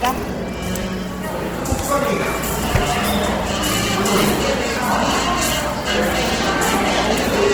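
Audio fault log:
throughout: Opus compression, likely, in its music mode: band energies are kept but thinly coded detail is filled in, so tones turn grainy, rough and noisy, consistent with roughly 16 kbps.
1.67 s, 3.05 s, 4.77 s: bit error spike. A single flipped bit makes one sample jump and return, giving a sharp broadband tick unrelated to the surrounding sound.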